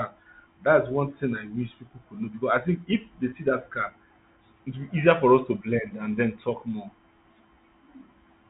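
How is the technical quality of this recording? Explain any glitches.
The recording has one brief glitch, carried over narrowband telephone coding consistent with G.711 that cuts everything above 4 kHz. Packet loss with pitch repetition at 3.30 to 3.32 s: about 20 ms of audio went missing, which fits a single lost packet, and the receiver filled the gap by repeating the last pitch period. It sounds like a tiny held, slightly buzzy blip rather than a dropout.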